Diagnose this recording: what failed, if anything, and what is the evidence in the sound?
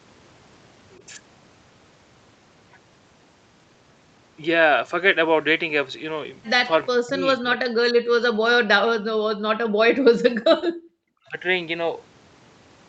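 The speech drops away in three stretches, 7.01 to 7.84 s, 8.23 to 10.17 s and 10.85 to 11.38 s, falling by around 40 dB at worst. Stage is call processing: likely speech suppressed in double talk, with the echo canceller unable to separate near talker from loudspeaker echo and attenuating both.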